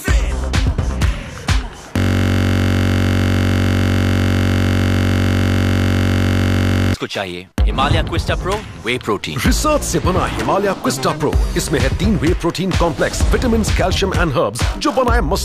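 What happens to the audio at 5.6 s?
At 5.6 s the audio is caught in a system hang loop running from 1.98 to 6.94 s. The hardware keeps replaying one 21.33 ms slice, which fits a 1024-sample ring buffer, while the system stalls. That produces a steady buzz at about 46.9 Hz instead of the sound.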